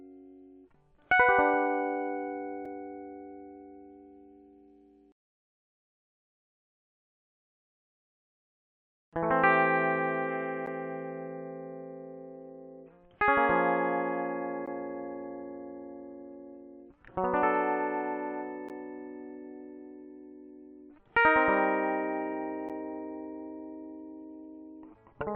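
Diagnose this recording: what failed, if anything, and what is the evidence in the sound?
Gap between stream segments at 2.65, 10.66, 14.66, 18.69 and 22.69 s: hard-edged silent holes of 4 to 13 ms cut into the music on a 4-second grid. At playback, segment timestamps leave small gaps that the player fills with silence, without losing audio.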